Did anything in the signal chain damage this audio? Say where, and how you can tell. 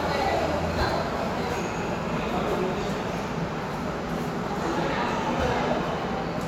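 Yes, chunks out of order at the driver or buffer stage: around 5.09 to 5.11 s, one roughly 12 ms chunk plays a slot late, giving a jumbled moment with hard joins.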